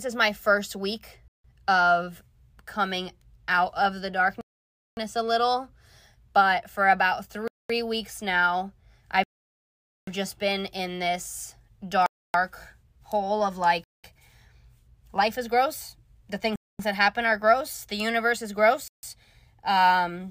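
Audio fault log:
1.28 to 19.03 s, Bluetooth stall: the speech cuts to silence at 1.28, 4.41, 7.48, 9.24, 12.06, 13.84, 16.56 and 18.88 s, each gap lasting 0.15 to 0.84 s before the speech resumes. The likely cause is interference delaying packets, which drained the headphones' buffer so playback paused until retransmissions arrived.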